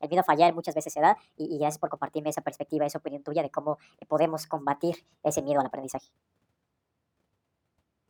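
From start to finish there's a wrong sample rate: everything runs 1.5 times fast and about seven semitones high, which fits 32 kHz audio played back at 48 kHz.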